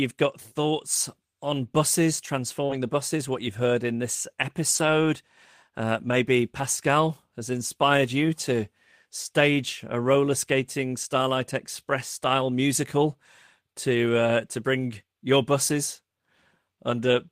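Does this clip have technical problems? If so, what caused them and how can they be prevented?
Yes. At 2.65 to 2.71 s there is short concealed packet loss. About 40 ms of speech arrived too late, so the decoder continued the preceding sound and blended back. The result is a brief smear, not the rough but intact texture of a rebuilt packet. A larger jitter buffer or steadier network path would prevent it.

There are also lost packets rebuilt from error correction at 2.69 to 2.79 s, 4.75 to 4.89 s and 5.99 to 6.17 s, lasting 60, 80 and 100 ms. That fits three, four and five lost packets. Low-bitrate copies fill each gap, so nothing drops out, but those stretches sound grainier and noisier. Reducing packet loss on the link, for example with a wired connection, would prevent them.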